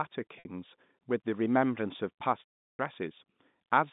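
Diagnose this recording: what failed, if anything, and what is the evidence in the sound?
Packet loss with pitch repetition occurred in the network stage, at 0.39 to 0.45 s and again from 2.51 to 2.79 s. The first gap of 60 ms sounds like a briefly held, buzzy note. The second, about 300 ms long, fades into silence before the speech cross-fades back. The receiver looped the last pitch period and then faded it out. On a spectrogram this appears as flat, evenly repeating harmonic bands that dim to blank. The waveform shows identical repeating cycles shrinking toward zero.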